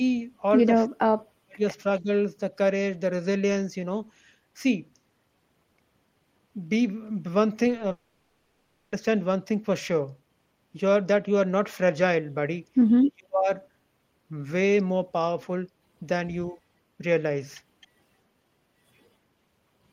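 From 0.85 to 1.61 s the speech is pushed down hard, by up to roughly 40 dB, and again briefly around 2.01 to 2.1 s (a milder dip of about 15 dB) and from 13.07 to 13.49 s (about 35 dB). This is likely speech suppressed in double talk: the echo canceller mistook the overlap of both sides for echo and turned down the near talker. Nothing is repeated or filled in, which separates it from packet-loss concealment.

From 7.70 to 7.84 s there is repeated packet loss with a robotic sound. Five short holes, none longer than 10 ms, are patched by stretching the preceding sound, so about a third of that span is synthetic. The result is a choppy, robotic flutter rather than a clean gap.

Right after, from 7.91 to 8.93 s, a long network dropout likely occurred. For about a second the receiver keeps extending the last sound as a decaying buzz or hiss instead of falling silent. Speech then resumes with that second missing, unlike the brief repeated holes just before it.

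At 17.81 to 17.87 s what is likely a faint echo leak appears: a copy of the speech about 264 ms behind the original, roughly 35 dB down. The delayed duplicate distinguishes it from concealment, which only extends the previous sound.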